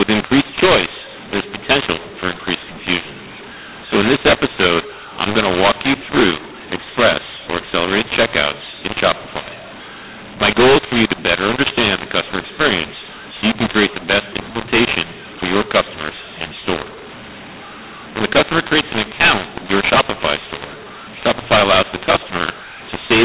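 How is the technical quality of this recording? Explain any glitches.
Poor. The speech is harsh and distorted from start to finish, over a telephone band that stops at 4 kHz. Mu-law and A-law mixed up, throughout: G.711 mu-law samples are decoded as A-law, scrambling their levels, so the speech sounds harsh and distorted and the pauses fill with noise.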